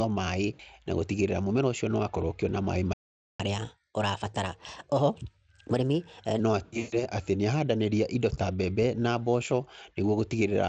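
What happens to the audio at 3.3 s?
The player most likely ran short of data or had its thread blocked, causing a playback stall from 2.93 to 3.40 s. For roughly 0.46 s the speech simply cuts to silence mid-flow, so at 3.3 s nothing is heard, then it resumes where it stopped.

Right after, the player works off its backlog through catch-up at higher speed, resampling to run 1.15 times faster from 3.40 to 6.40 s. The speech sounds hurried and its pitch rises by about two semitones until it settles back to normal.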